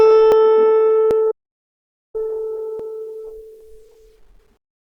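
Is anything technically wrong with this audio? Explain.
Yes. The music skips ahead four times: at 0.32 s (roughly 40 ms lost), 1.11 s and 2.80 s (roughly 20 ms each), and 3.61 s (roughly 70 ms). These are most likely dropped buffers (overrun). The recording software didn't collect its samples before the hardware overwrote them, so each missing chunk leaves no gap. The music on either side is butted together, which produces the jump.

From 1.32 s to 2.15 s the music cuts out to total silence for about 0.83 s, with no room tone or background underneath, and then resumes mid-flow. This is likely an audio dropout to silence. The input signal was lost, perhaps through a disconnected device, a failed link or a stray mute, while the recorder kept writing silence, so everything played during that stretch is missing.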